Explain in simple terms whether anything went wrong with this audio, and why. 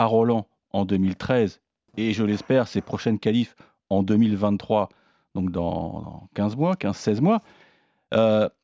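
Nothing went wrong with this audio; no faults can be heard anywhere in the recording.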